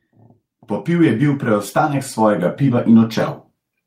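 A speech recording with automatic gain rising: from 0.85 s to 2.97 s the level climbs steadily by about 8 dB as the gain control, sensing a quiet input, turns itself up over roughly two seconds. What separates this from a talker leaning toward the microphone is that the background noise swells by the same amount as the voice, so the speech-to-noise balance stays fixed while everything simply gets louder.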